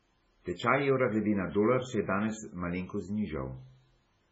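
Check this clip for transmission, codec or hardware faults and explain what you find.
One fault runs through the whole speech clip: MP3 compression damage, likely from a very low-bitrate MP3 encode. Nothing remains above about 7.7 kHz, and the damage is heavy, which fits a rate near 16 kbps. Starved of bits, the encoder cut the treble at a fixed point and discarded weak spectral lines, which drop in and out between frames. The result is a dull, watery, swirling sound with smeared attacks.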